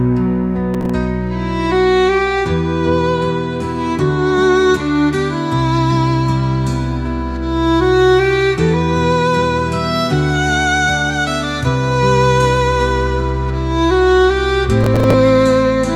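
Processor overload crackle hits at 0.74 to 0.90 s and again at 14.84 to 15.14 s: missed deadlines on what sounds like roughly 5 ms buffers replay stale audio, giving gritty, tearing bursts.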